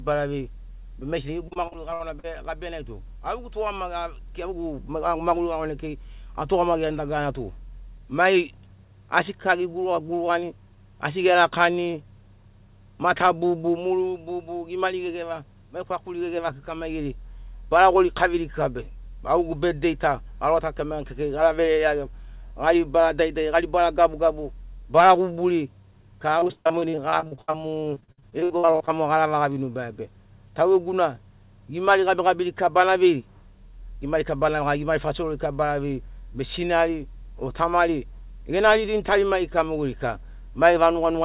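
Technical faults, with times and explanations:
1.48–2.26 s, repeated packet loss (robotic sound): seven short holes, the longest 60 ms, leave about 28% of this stretch patched by extending the previous sound, so the audio turns choppy just before "gabia nai tu". The gaps recur in quick succession, which sets this apart from a single dropout or click.
26.40–28.89 s, repeated packet loss (robotic sound): a heavier run of 35 gaps, the longest 76 ms, with about one second of audio missing and 40% of the span concealed. The repeated patching gives a choppy sound with pieces missing rather than isolated holes, heard within the telephone-band sound of a call path that has nothing above 4 kHz.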